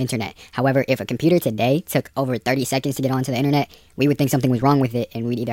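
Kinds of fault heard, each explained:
Wrong sample rate: the speech runs 1.38 times too fast and about 5.5 semitones high throughout, sounding hurried and squeaky, which fits 32 kHz audio played at 44.1 kHz unconverted. A spectrogram shows harmonics and formants shifted upward, with every event compressed in time.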